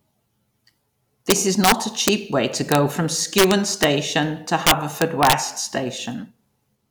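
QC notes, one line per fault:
1.30–5.33 s, integer overflow: violent cracks at 1.30–1.72 s, 2.08 s just before "way to", 2.72–2.75 s just after "way to", 3.38–3.84 s and 4.67–5.33 s. The speech peaks run past the largest integer value by about 3 dB, about 0 dB at 2.72 s, and about 5 dB at 4.67 s. Instead of being limited, they wrap to the opposite sign and jump across the full range, which sounds far harsher than clipping.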